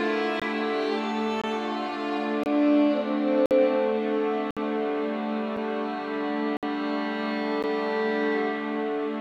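Hard-edged holes of silence cut into the music roughly once a second, at 0.40–0.42, 1.42–1.44, 2.44–2.46, 3.46–3.51, 4.51–4.57, 5.57, 6.57–6.63 and 7.63 s, lasting 6 to 59 ms. These are gaps between stream segments: the time stamps of consecutive 1-second segments leave a small gap, which the player fills with silence, so no music is lost.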